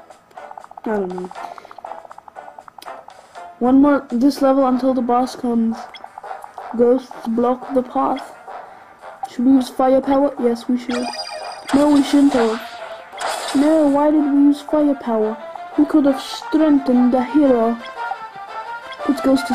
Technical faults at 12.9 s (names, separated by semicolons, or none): none